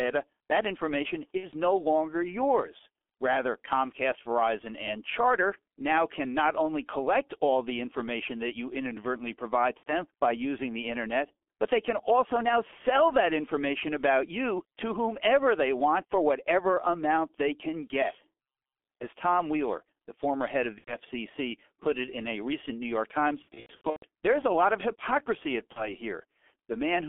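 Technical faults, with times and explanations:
Throughout, G.723.1 codec: the speech is muffled and hoarse, with smeared consonants and nothing outside roughly 300 Hz to 3.5 kHz. Heavy low-rate coding, consistent with about 6.3 kbit/s, rebuilds the voice from a coarse, slowly updated model in 30 ms frames.
1.37–1.46 s, 9.77–9.92 s, 20.79–20.96 s, 23.42–24.06 s and 25.73–25.89 s, VoIP packet loss concealed by the speech codec: the speech stretches into a fading buzz or coloured noise and stays weak briefly afterwards. The decoder extrapolated its last pitch and filter across gaps of 60 ms, 90 ms, 90 ms, a scattered 390 ms (longest run 120 ms) and 30 ms.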